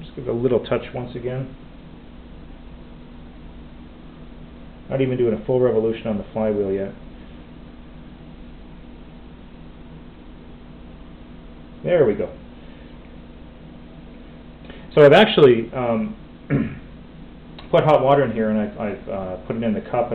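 No technical faults can be heard in this clip.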